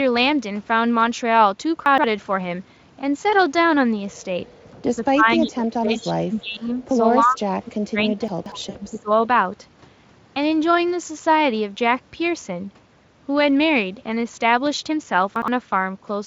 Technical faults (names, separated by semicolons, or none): chunks out of order; speech suppressed in double talk; VoIP packet loss concealed by the speech codec